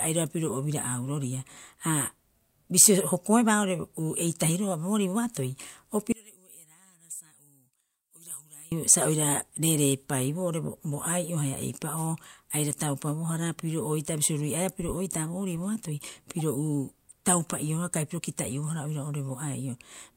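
From 6.12 to 8.72 s the speech drops by about 21 dB and turns faint and distant, likely one channel inverted, so the shared centre cancels in mono. At 16.39 s there's a brief, fairly quiet glitch where a corrupt frame was decoded: flipped bits in a single frame put energy at the wrong frequencies.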